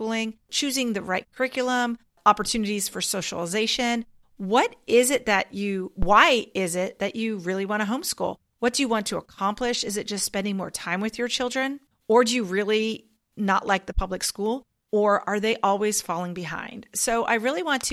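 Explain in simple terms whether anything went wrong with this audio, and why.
A phantom power thump occurs at 6.02 s, just after "is it that you", and lasts until about 6.21 s, where "is it that you" is heard again. It sounds like a short, deep bump under the speech. It is caused by the microphone's power supply being switched while the input was live: that sudden step in voltage passes through the input circuitry as a low thud, which here dies away in roughly 41 milliseconds.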